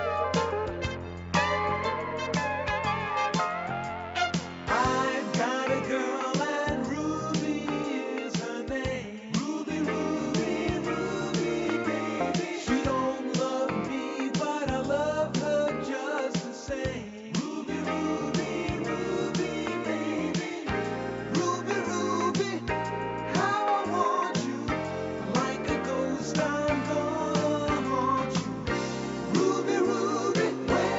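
No technical faults are audible.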